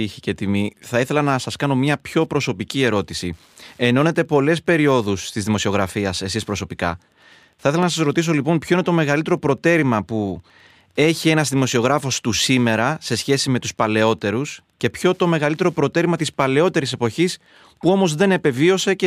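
Speech runs under Wi-Fi interference from start to finish: a faint, steady ticking roughly 45 dB below the voice, repeating every 102.4 ms. A nearby radio's beacon is being rectified by the audio circuit. Its slow, even ten-per-second tick distinguishes it from mobile-phone buzz.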